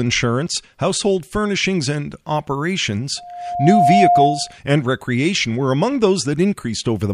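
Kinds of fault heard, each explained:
Loudspeaker feedback squeal: the mic is hearing the speaker it drives, and at one frequency the loop gain tops one, so that tone feeds itself. Here it's a single tone at 707 Hz that swells over roughly 0.7 s, starting around 3.17 s, until it sits a few dB above the speech. It cuts off at about 4.58 s, right before "and recreation were among".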